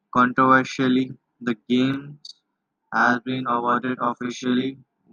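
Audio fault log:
1.94–5.12 s: channel delay (doubling). From 1.94 s to the end, the speech is heard twice. One channel runs about 40 ms late, and the two are summed to mono. The late copy arrives at equal level as a distinct slap, so the speech doubles.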